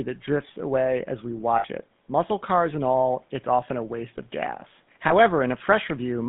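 The whole clip carries the GSM full-rate codec sound: speech squeezed into a 150 Hz to 3.6 kHz band, with the buzzy, gravelly edge that comes from rebuilding the voice from a vocal-tract model and a coarse pulse excitation, which fits the old 13 kbps full-rate coder.

At 1.58 to 1.66 s there are lost GSM frames, roughly 60 ms of missing audio. The decoder fills the hole by repeating the last good frame, so you hear a short metallic ring instead of the speech. A shorter one, about 20 ms, hits at 5.08 to 5.12 s.

Room noise sits about 42 dB under the speech.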